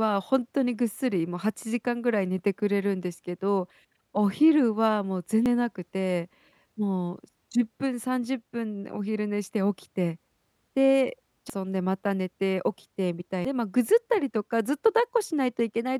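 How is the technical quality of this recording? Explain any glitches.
The recording has three short glitches from damaged data in a compressed stream, at 5.46 s, 11.50 s and 13.45 s. At each point, corrupted bytes in the encoded speech leave the decoder unable to read the frame, so it loses sync and hunts for the next valid frame header. Each event is a brief chirp or blip that breaks the flow of the speech. A spectrogram shows a thin vertical smear of broadband energy, and the waveform shows an abrupt discontinuity.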